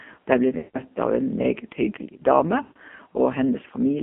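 The whole clip is speech through an AMR narrowband mobile codec. The band runs from about 200 Hz to 3.5 kHz, so nothing bright survives. The damage is heavy. The voice sounds buzzy and synthetic, as the codec rebuilds it from a crude vocal-tract model and a few pulses. That thinness fits one of the lowest AMR-NB modes, near 5.9 kbps.

From 0.58 to 0.97 s there are lost AMR speech frames. About 160 ms of audio never arrived intact. The decoder repeats the last good pitch and tract settings at falling gain. The sound smears, stretches, then fades toward silence. It returns rough and weak.

A second run of lost frames spans 2.62 to 2.79 s, about 140 ms. The same drawn-out fade follows, then a brief ragged recovery.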